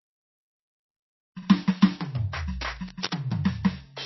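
Throughout, the music sounds watery and swirly, with nothing above 5.8 kHz; this is likely MP3 compression at a low bitrate, around 24 kbps. From 2.61 to 3.14 s, dense, uneven scratching sits about 10 dB below the music, likely cable scratch noise from a worn contact being moved.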